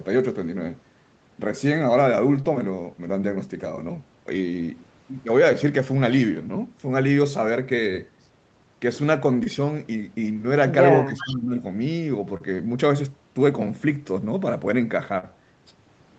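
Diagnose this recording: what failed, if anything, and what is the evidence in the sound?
Packet loss on the network, concealed at the decoder. You get brief smears or wobbles at 2.41, 9.44, 10.33, 12.37 and 15.18 s. Each one lasts somewhere around 35 to 60 ms. The receiver is papering over a gap by stretching the last bit of sound and then crossfading back into the real audio. Most gaps come out to 20 ms of missing audio, which fits 20 ms packets. The one at 15.18 s is twice that, so probably two in a row.

Speech suppressed in double talk, at the call-processing stage. From 11.08 to 11.56 s the near talker dips, by about 15 dB at the deepest point, with roughly 0.4 s of the stretch pulled down. The likely story is both ends talking at once. The echo canceller couldn't tell its own talker apart from the loudspeaker echo, so it ducked everything instead of risking sending echo back.

Echo leak, again in call processing. 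Between 11.17 and 11.34 s there's a delayed copy of the voice, about 15 dB under the speech and trailing it by about 0.4 s. That most likely means the far end is on a loudspeaker and its canceller let some of the mic pickup through and back down the line. The leak falls right inside that suppressed stretch, which fits both ends fighting over the same moment.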